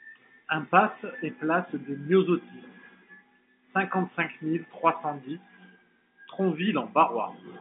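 No technical faults can be heard in this speech.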